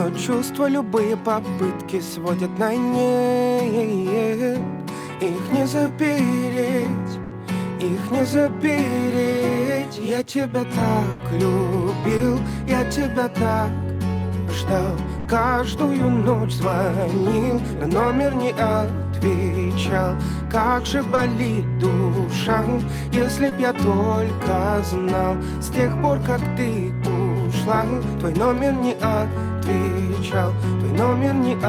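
Burst of packet loss at 7.23 to 7.33 s and again at 11.11 to 11.21 s: a run of packets failed to arrive in time, and the receiver bridged about 80 ms each time by stretching the last received sound while fading it down. It comes across as a held buzz or fading hiss, then the audio picks up further along with that stretch missing.

Short concealed packet loss at 12.17 to 12.21 s: roughly 20 ms never reached the decoder, so the gap was filled by extrapolating the preceding sound and crossfading back into real audio, heard as a brief smear or wobble.

Burst of packet loss at 15.19 to 15.27 s: the same stretch-and-fade fill, shorter at about 60 ms, with that much of the audio skipped.

Short concealed packet loss at 21.15 to 21.19 s and 23.49 to 23.53 s: two more 20 ms fills, each a momentary wobble where a short sound can drop out.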